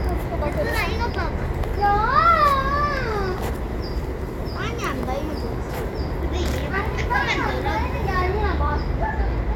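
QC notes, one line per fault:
Nothing to flag here; the sound comes across with no problems worth noting anywhere in the clip.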